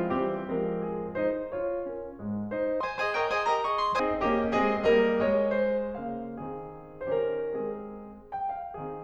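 A section at the wrong speed runs from 2.81 to 4.00 s, where the music suddenly plays at twice its proper rate. Because speed and pitch move together, everything in that stretch jumps up by roughly ten semitones and sounds rushed and chipmunk-like, then drops straight back to normal. The likely cause is that this portion was clocked or resampled at the wrong rate, so its samples were read out twice as fast as they were captured.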